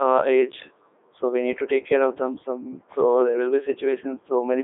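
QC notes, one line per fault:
Throughout: Codec 2 vocoder. Heavily robotic, buzzy speech rebuilt from sine waves, so the waveform is lost. Band 300 Hz to 3.6 kHz, empty above 3.7 kHz, consistent with 3.2 kbit/s.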